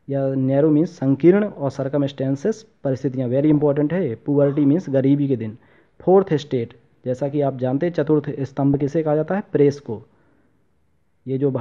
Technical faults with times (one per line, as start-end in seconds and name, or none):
3.52-3.62 DAB burbling
8.74-8.88 DAB burbling